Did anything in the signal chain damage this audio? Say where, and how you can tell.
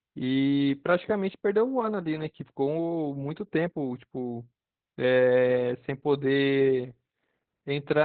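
Yes, the codec stage damaged it, throughout the clip. This is Opus voice compression at a very low rate. Nothing is heard above about 4.5 kHz, so the speech is narrowband and muffled. The voice also sounds hoarse and slightly robotic. That points to the SILK linear-prediction coder running alone, at a rate that fits about 8 kbps. At that rate the encoder drops the upper band and codes the excitation coarsely, so the damage is heavy.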